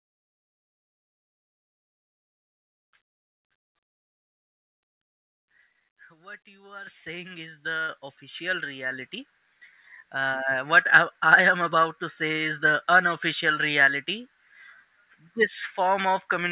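The speech jumps abruptly louder, voice and background together, at 6.87 s (about 10 dB, between "what you are" and "saying is"), then at 7.89 s (about 5 dB) and 8.91 s (about 4 dB). This is microphone volume stepped up: the call software raised the input level in discrete steps. The sound stays band-limited to 4 kHz through the G.711 call path.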